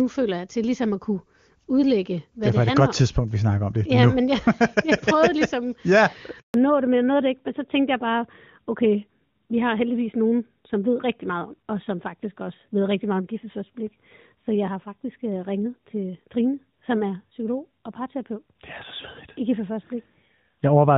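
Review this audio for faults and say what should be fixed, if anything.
A handover gap starts at 6.40 s. The speech dies away and stays silent for 140 ms while the call moves between networks, resuming at 6.54 s. Anything said in that window is lost. Tuning handover timing so the new link is ready before the old one drops would prevent it.

A fallback to narrowband follows from 6.54 s to the end. Nothing above 4 kHz survives, so the speech sounds duller and rougher. This fits a drop from HD Voice on AMR-WB, near its top rate of 23.85 kbit/s, to AMR-NB at 12.2 kbit/s. Keeping HD Voice enabled on both networks, so the codec is renegotiated as wideband after handover, would prevent it.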